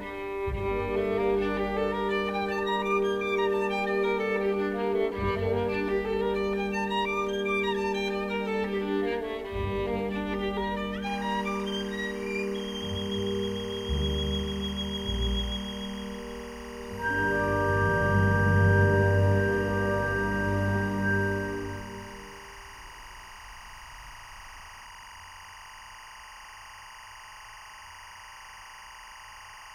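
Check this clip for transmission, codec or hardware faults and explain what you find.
One hardware fault is present. Timecode bleed runs from 11.06 s to the end of the clip. Linear timecode at 23.976 frames per second leaks in from an adjacent track or cable, its square wave flipping between roughly 1 kHz and 2 kHz. The result is a steady chirping warble about 20 dB beneath the sound.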